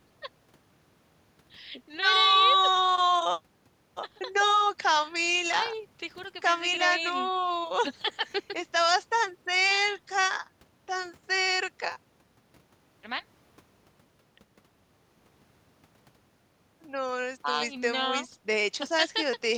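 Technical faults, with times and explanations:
No technical faults can be heard in this speech recording.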